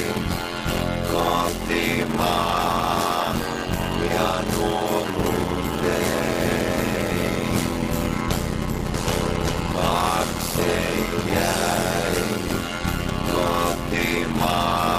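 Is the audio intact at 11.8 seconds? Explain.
No. A block size mismatch (padded) runs throughout. Short blocks are zero-filled to fit a 512-sample read, causing an 86.1 Hz buzz and playback at 0.625 speed.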